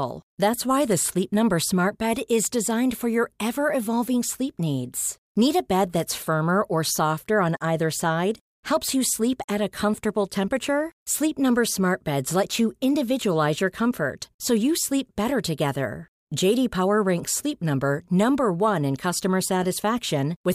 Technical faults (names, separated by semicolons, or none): none